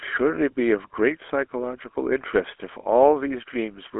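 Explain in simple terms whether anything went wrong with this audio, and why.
Yes, the speech has passed through the GSM full-rate codec, the one used by early mobile phones, and it stays that way from start to finish. The codec rebuilds the voice from a simple model driven by a sparse pulse train, which leaves a plainly audible buzzy, gravelly roughness. Nothing above about 3.8 kHz survives. A plain phone line would sound just as thin, with sound only between roughly 300 Hz and 3.4 kHz, but it would stay smooth. This grainy buzz is what points to the codec.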